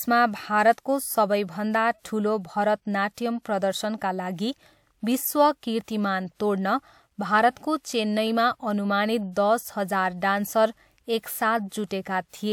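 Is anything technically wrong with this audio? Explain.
Yes, there is pre-echo twice, from 3.12 to 3.17 s (about 59 ms) and from 9.32 to 9.36 s (about 43 ms). The transform codec sized its quantisation noise for a loud onset that arrived late in a block, so that noise also spread backwards into the quiet stretch just before it. Each time, a short hiss leads into the attack, which sounds blurred. Unlike reverb or echo, the smear comes before the sound, not after it.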